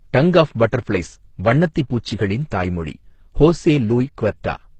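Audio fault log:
Throughout, transcoding between lossy codecs: the speech stops at 8.5 kHz and shows two mixed artefact types, heard together. One codec sounds uniform, not layered. This likely comes from a very low-rate Opus encode re-encoded as HE-AAC.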